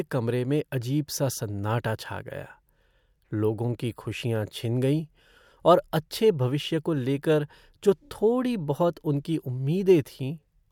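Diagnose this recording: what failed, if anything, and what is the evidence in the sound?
Nothing failed; I hear no faults in this speech.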